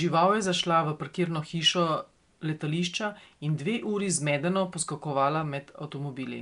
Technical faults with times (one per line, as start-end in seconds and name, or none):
0.00-6.41 Nellymoser compression